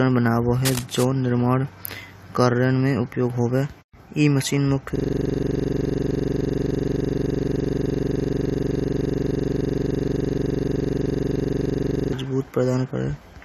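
From 0.64 to 1.04 s, a dense, uneven scratching runs over the speech at about 10 dB below it. This cable scratch noise likely comes from a worn cable or connector being moved. From 4.96 to 12.13 s, a 42.67 ms slice repeats as a 23.4 Hz stutter. This system hang loop happens when the audio device keeps cycling one buffer, consistent with a 2048-sample buffer.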